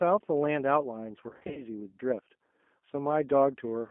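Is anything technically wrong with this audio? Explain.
Yes. Throughout, the speech carries G.729 codec damage: band-limited to about 200 Hz to 3.4 kHz, rough and synthetic, unlike plain telephone filtering, which stays smooth.

From 1.29 to 1.64 s, VoIP packet loss concealed by the speech codec: about 180 ms lost across 280 ms, runs up to 40 ms. The decoder extrapolates fading buzzy tones or coloured noise rather than leaving silent dropouts.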